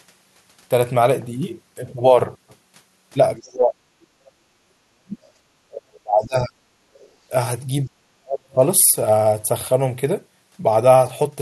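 From 3.39 to 3.81 s, 4.82 to 5.17 s, 5.68 to 6.59 s and 7.86 to 8.6 s, the talker's speech is pulled down by roughly 30 to 40 dB, in places almost to silence. This is speech suppressed in double talk, likely the echo canceller turning the voice down because it could not separate it from the far side talking at the same moment. Unlike gating, the speech itself dips.

Between 4.12 and 4.49 s only the room sound sinks, by about 9 dB, then recovers. This is background gated by the echo canceller, clamping the microphone while the loudspeaker played. The voice is not what falls away here, just the ambience underneath it.

At 6.94 to 7.09 s a brief, faint scrap of the other side's voice leaking through appears, sitting far beneath the talker, around 35 dB down. It is an added voice rather than a loss of level.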